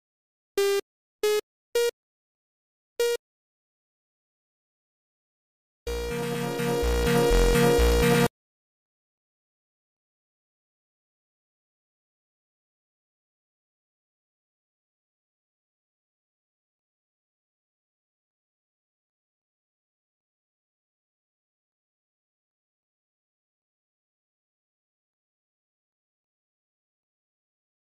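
Zipper noise runs from 2.97 to 3.99 s. The level falls about 10 dB in unsmoothed 1 dB steps, roughly ten a second, each one clicking.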